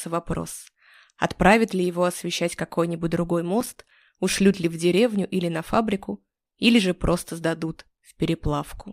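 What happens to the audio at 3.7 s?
A burst of gritty crackle tears through the sound from 3.61 to 3.91 s, made of tiny hard-edged dropouts. This is processor overload crackle: the processor misses around ten deadlines for its short audio buffers, each lasting a few milliseconds, and every miss leaves a brief gap of silence.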